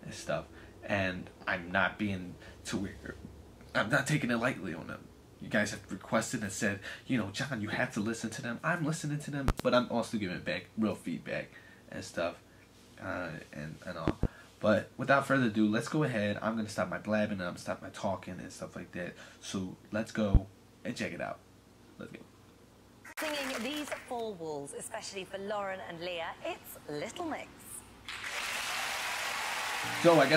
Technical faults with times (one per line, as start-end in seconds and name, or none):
9.48-9.63 loud pop
14.08-14.27 loud pop
20.35-20.38 loud pop